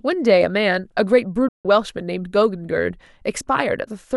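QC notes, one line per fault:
1.48 to 1.65 s, digital broadcast dropout. The speech cuts to silence for about 160 ms, then picks up again. The drop is not a hard click. The level falls away over roughly 3 ms, so it sounds like a sudden mute. The receiver lost good frames and muted its output until valid ones returned. The gap fits about five lost frames. Whatever was sent during that hole is gone.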